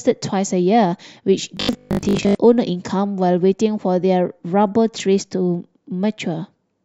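Robotic sound from repeated short buffers runs from 1.57 to 2.35 s. The speech collapses into a stiff, metallic buzz locked at 50 Hz while still loosely tracking the syllables. The likely cause is audio arriving too slowly for playback, so the last fragment is looped to fill the gap and most of the real signal in that stretch is skipped. The 50 Hz buzz fits a 20 ms chunk being repeated.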